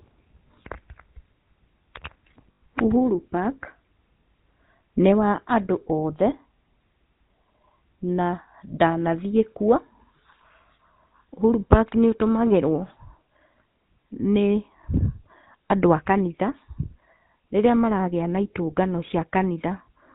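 The GSM full-rate codec colours the speech from start to finish, and its damage is plainly audible. The codec keeps a model of the vocal tract and drives it with regularly spaced pulses, sampling the excitation only every third point, which fits the 13 kbps full-rate scheme. Nothing reaches above 4 kHz, so the top is dull, and the voice carries a constant buzzy, gravelly roughness.

Lost GSM frames break the speech from 2.52 s to 2.61 s. For around 0.1 s, which fits five missing 20 ms frames, the decoder had no good data. It repeated the settings from the last good frame. The gap is filled by a held, rough, metallic ring rather than the speech that should be there. Normal decoding resumes at 2.61 s.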